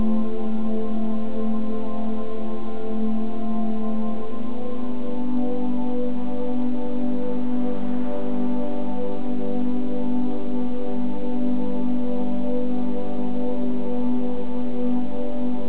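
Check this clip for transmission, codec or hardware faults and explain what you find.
No transmission, codec or hardware faults can be heard in this clip. The audio stops at about 4 kHz, with the narrowband character of a normal call path, which fits a G.711 mu-law codec.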